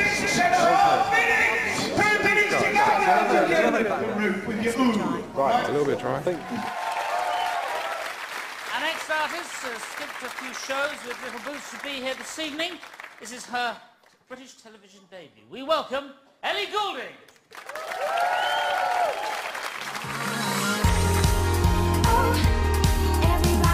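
Right from the start and running until 3.72 s there's a doubled audio track: a second full-band copy of the sound trails the original by roughly a third of a second, sitting a few dB lower. It's dry, with no decay or room colour, so it reads as a clean slapback rather than an echo. The likely cause is the signal being picked up again through a slower path. At 3.72 s the copy just drops out abruptly.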